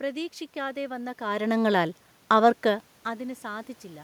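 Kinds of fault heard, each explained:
No system fault is audible in the speech: the background noise belongs to the room the recording was made in, and the level shifts near 1 s and again around 2.5 s come from the talker moving relative to the microphone, not from the signal chain.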